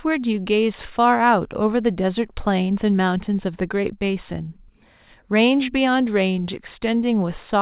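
No technical faults can be heard in this speech. It has passed through mu-law telephone coding at 8,000 samples a second, so nothing above 4 kHz is present and a faint hiss rises and falls with the level about 38 dB below it.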